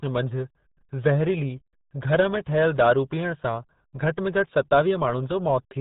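The speech has been passed through the RealAudio 14.4 codec from start to finish, and the heavy damage suggests a very low bitrate, which fits an 8 kbit/s stream built for dial-up modems. To squeeze speech into so few bits, the coder discards everything above about 4 kHz and rebuilds the rest coarsely. The result is muffled and dull throughout, with a gargling, watery quality.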